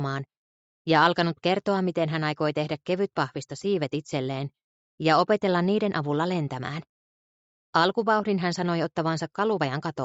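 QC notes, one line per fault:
Nothing to flag here, with the call path simply keeping the sound under 8 kHz as it normally does.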